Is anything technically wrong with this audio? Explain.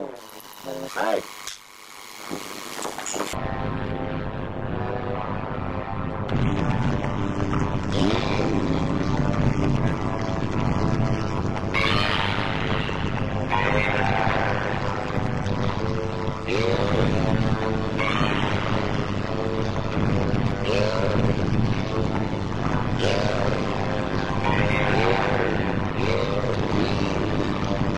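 Yes. Overlap-add ripple runs through the whole clip. The audio was split into windowed frames and rejoined with an overlap whose window gains don't add up to a constant, so the level dips once per frame, around 100 times a second, by about 60 dB at its deepest. It sounds like a metallic buzz with extra tones around each note. On a waveform the envelope is chopped into evenly spaced notches, and a spectrogram shows regular vertical stripes at that rate across every frequency.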